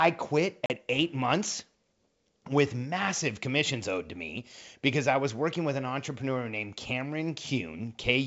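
Packet loss on an ADPCM call occurs from 0.66 to 0.71 s, just before "eight months". About 40 ms of audio, a couple of packets, is replaced by a hard-edged silence. The decoder's adaptive predictor and step size then fall out of step with the sender's, so the returning audio is mis-decoded until they realign. The G.722 wideband coding at 64 kbit/s carries the rest.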